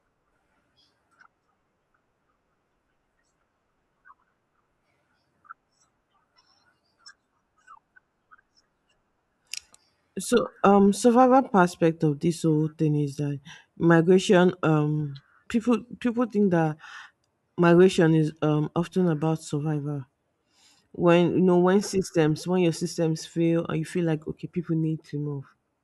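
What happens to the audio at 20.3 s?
Nothing goes wrong at 20.3 s; the speech continues cleanly through that moment with no dropout, click or distortion.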